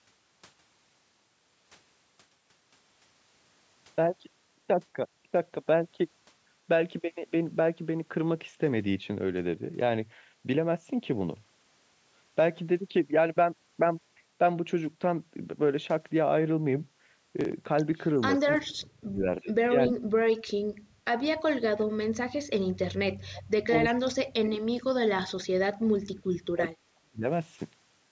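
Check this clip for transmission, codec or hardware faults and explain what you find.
The speech is cut back four times in the last third, at 18.7 to 21.0 s, 21.83 to 22.25 s, 22.59 to 25.5 s and 25.92 to 27.25 s. Each time it drops by as much as about 40 dB or breaks into fragments. This is speech suppressed in double talk, likely from an echo canceller that mistook the near talker for loudspeaker echo while both sides spoke and attenuated everything. The call microphone processing's 8 kHz ceiling is normal and not a fault.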